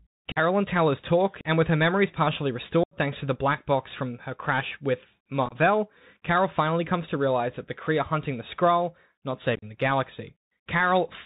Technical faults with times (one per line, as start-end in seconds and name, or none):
0.00-11.26 Bluetooth CVSD headset codec
0.32-0.38 unconcealed Bluetooth headset packet loss
1.41-1.45 unconcealed Bluetooth headset packet loss
2.83-2.97 unconcealed Bluetooth headset packet loss
5.46-5.56 unconcealed Bluetooth headset packet loss
9.55-9.64 unconcealed Bluetooth headset packet loss